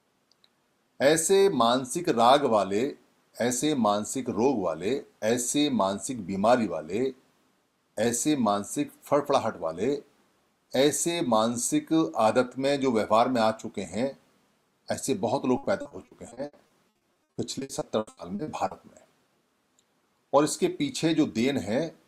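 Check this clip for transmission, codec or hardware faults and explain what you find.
One transmission fault. From 15.57 to 18.73 s, repeated packet loss (robotic sound): 22 lost or late packets, each covered by extending the previous audio, concealing about 30 percent of the stretch, gaps up to 80 ms, leaving choppy sound with pieces missing.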